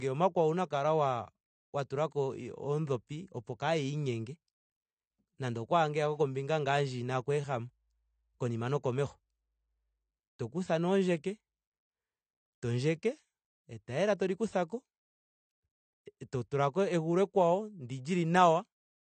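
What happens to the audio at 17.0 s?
At 17.0 s the speech carries the same damage heard throughout: nothing above 8.6 kHz, with a dull, smeared, warbling texture on sibilants. That likely points to AAC compression at a low bitrate, around 32 kbps, where starved frequency lines leave holes, unlike a plain low-pass filter's clean dulling.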